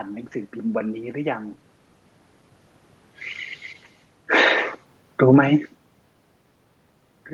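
Automatic gain falling, from 5.07 to 5.49 s in this speech recording: the gain control judged the input too loud or its background noise too strong and pulled its gain down by about 6 dB over that span, so the voice and the room noise behind it sink together rather than the voice alone fading. Automatic gain rising follows almost at once, from 5.41 to 5.82 s, when the input level dropped by about 22 dB and the control reacted by lifting its gain about 4 dB, making voice and background swell in step. The two overlap, so the level dips and then climbs partly back within under a second. The quieter and louder passages near 1.5 s and 6.5 s are different. There the talker moves relative to the microphone, and the voice changes level against the room noise.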